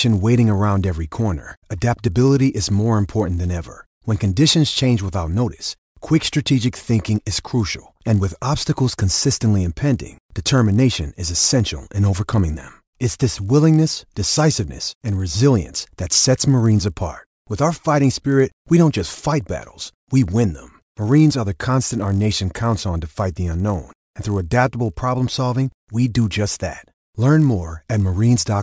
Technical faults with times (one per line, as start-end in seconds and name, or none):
0.00-28.63 resampler restarted on every block